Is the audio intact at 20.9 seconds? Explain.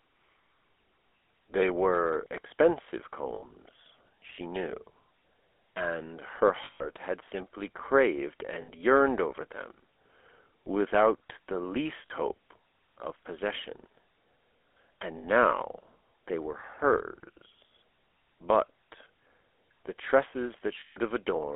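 No. From 20.80 to 20.98 s the audio is hit by lost GSM frames. The decoder repeats the last good frame's settings, so the sound freezes into a rough, metallic ring. The gap of about 160 ms fits eight lost 20 ms frames.

The same moment also carries the GSM full-rate codec's damage, heard across the whole clip. Speech is squeezed into a 300 Hz to 3.5 kHz band. A pulse-driven vocal-tract model, consistent with a 13 kbps coder, leaves a plainly audible buzzy, gravelly roughness.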